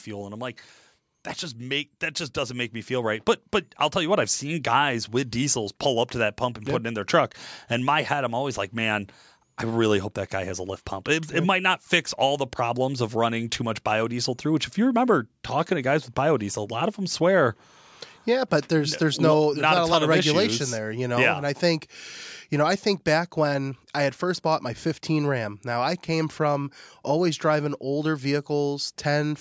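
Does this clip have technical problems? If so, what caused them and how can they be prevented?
Yes. Just after "that just", from 1.55 s to 10.9 s, the level climbs steadily by about 7 dB: automatic gain rising. The automatic gain control judged the input too quiet and kept turning it up over those nine seconds, so the speech and the room noise swell together. That slow, joint rise over several seconds distinguishes it from compressor pumping, which ducks and recovers with each syllable. To prevent it, set a proper fixed microphone level and disable automatic gain control in the calling software.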